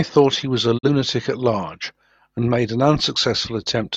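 At 0.77 s the speech fades out over about 20 ms and stays silent until 0.89 s. This is a digital broadcast dropout. The receiver stopped getting usable frames and muted its output rather than play damaged data. Roughly 43 ms of the programme is gone, which fits a single lost frame. The hole is brief and clean, with no crackle. When good frames return, the speech resumes later in the programme, not where it broke off.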